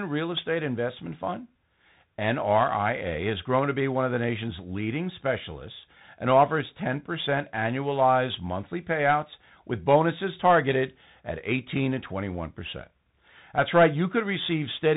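A speech recording that sounds boxed-in and gritty throughout, with nothing above about 3.8 kHz, scratchy s sounds, rough distortion on loud bright moments and a granular hiss beneath. This is Bluetooth CVSD headset codec damage: each sample is a single up-or-down bit whose adaptive step cannot keep pace with fast high-frequency swings, consistent with a 64 kbit/s stream.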